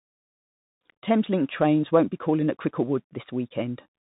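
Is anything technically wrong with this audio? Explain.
Yes. Throughout the speech, it has passed through the Bluetooth CVSD headset codec, which fits a 64 kbps link. Each sample is coded as a single up-or-down step whose size adapts, and nothing above 4 kHz survives. The speech sounds muffled, s sounds turn scratchy, and a granular hiss sits underneath.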